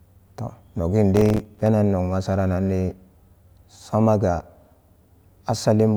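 From 1.16 to 1.66 s, a burst of gritty crackle tears through the speech, a rapid run of tiny dropouts with hard edges that stops once the half-second passes. This is processor overload crackle: the processor fell behind and missed around twenty buffer deadlines in that stretch. Each missed buffer, only a few milliseconds long, left a short gap of silence, and the abrupt cuts in and out of those gaps produce the crackling texture.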